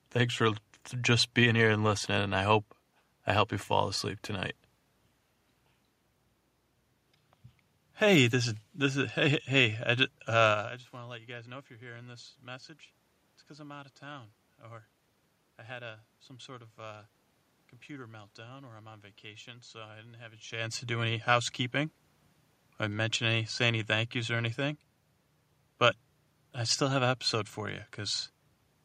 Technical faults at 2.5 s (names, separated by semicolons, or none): none